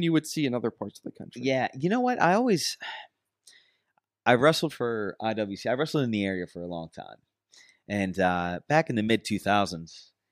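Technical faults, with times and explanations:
No technical faults are present in this speech recording, and the signal carries through without any audible break or disturbance.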